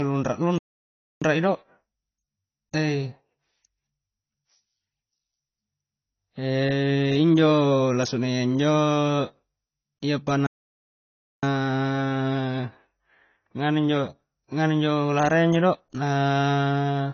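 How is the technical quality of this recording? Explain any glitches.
The technical quality is poor: the whole recording carries plainly audible compression damage, and the speech twice stops dead before carrying on.

AAC compression is present from start to finish. Nothing is heard above 6.6 kHz, so sibilants lose their edge and the speech sounds dull and smeared. That damage is plainly audible and fits AAC-LC at a low bitrate, around 24 kbps. The encoder likely dropped and quantised frequency bands coarsely to save data. What separates this from a simple low-pass filter is the swirly, fizzy texture on sustained sounds, not just a loss of brightness.

Playback stalls occur from 0.58 to 1.22 s (about 0.63 s) and from 10.47 to 11.43 s (about 0.96 s). In each, the audio cuts to silence mid-flow and then resumes. The likely cause is the player running short of data or its thread being blocked until it recovered. 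Unlike a dropout that skips material, a stall inserts a gap of silence, and the sound then carries on.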